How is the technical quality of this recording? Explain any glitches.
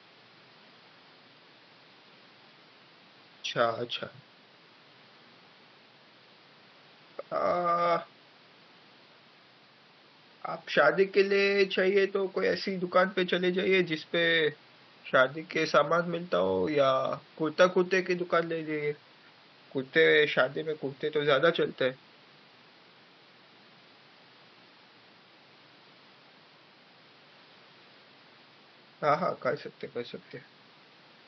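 No glitches turn up anywhere in the recording; the only thing under the speech is a faint room noise about 30 dB below it, which belongs to the space around the microphone rather than to the recording system.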